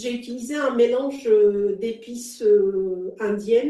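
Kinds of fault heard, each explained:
Short stall from a late packet: at about 1.16 s a packet arrived late, so the receiver held the last bit of speech for about 18 ms until it came, then resumed where it left off. Nothing is lost, only held, unlike a dropout, which leaves a gap or skips ahead.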